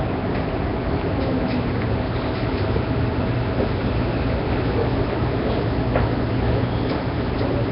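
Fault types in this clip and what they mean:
Nellymoser compression: likely Flash's Nellymoser Asao codec; weak bands refilled with rough hiss, a smeared underwater blur, nothing above 5.3 kHz, unlike a clean low-pass.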